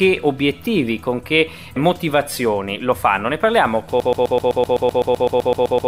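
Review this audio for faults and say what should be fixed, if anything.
From 4.00 s to the end, a broken-record loop repeats one 127 ms fragment fifteen times, likely a stalled player or stream resending its last buffer, so the audio due there is lost; it shows on the waveform and spectrogram as identical blocks tiled at a steady interval. Prevent it with stall detection that drops to silence or re-buffers instead of replaying stale data.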